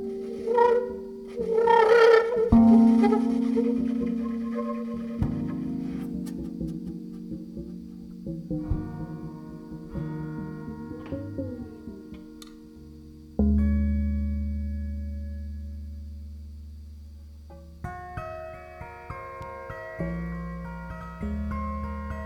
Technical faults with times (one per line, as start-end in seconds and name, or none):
none